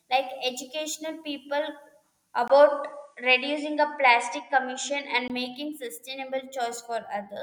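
At 2.48 s the speech drops out for about 20 ms and then resumes duller and narrower, with nothing above 9.7 kHz, a level shift of roughly 5 dB, and a faint new background noise around 50 dB below the signal. At 5.30 s the fuller sound returns. The abrupt change in bandwidth, level and noise floor points to an input switched to a poorer device, likely a different microphone or a headset profile.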